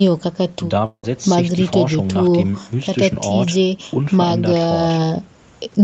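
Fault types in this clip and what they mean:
long network dropout: From 0.85 to 1.05 s the speech smears into a buzz that fades over about 176 ms and sinks into silence, then resumes with about 180 ms skipped, likely a network outage. A brief packet-loss glitch would blur speech without losing it.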